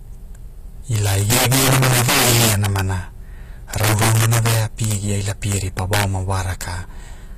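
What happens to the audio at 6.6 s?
Integer overflow is present at 6.6 s, as it is through the whole clip. The signal is driven roughly 15 dB past full scale, and instead of being limited, every sample that crosses the integer ceiling wraps around to the opposite extreme. A small fraction of samples, around three percent, exceed the limit, so only the loudest peaks of the speech break. Those peaks become violent, sharp cracks, harsher than ordinary clipping.

At the same moment, the treble has a gritty, metallic quality, with s sounds turning lispy and nothing above about 14.9 kHz. This is likely HE-AAC compression at a low rate, which fits something near 24 kbps. Only the lower spectrum is truly coded. The upper bands are rebuilt by copying lower ones upward under a coarse envelope, so the harmonics above the crossover fail to line up with those below it.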